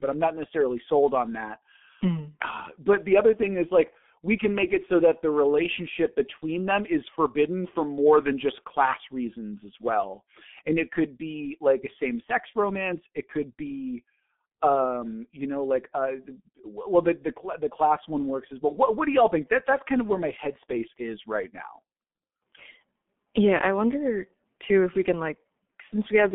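From start to end the speech carries G.723.1 codec damage: nothing above about 3.7 kHz, a 200 Hz to 3.5 kHz telephone band, and a heavy hoarse, smeared quality from its slowly updated voice model. That coarseness, which fits roughly 6 kbit/s, separates it from plain band-limiting.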